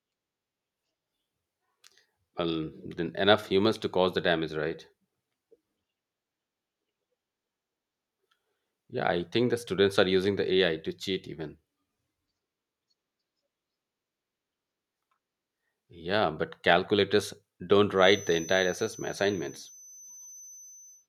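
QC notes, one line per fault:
17.92–21.08 s, feedback whistle: right after "yeah but calculators don't", a thin 6.1 kHz tone, slowly swelling and fading, sits some 20 dB under the speech until the end, likely a loudspeaker-to-microphone loop held at the edge of feedback, sustaining one frequency without running away.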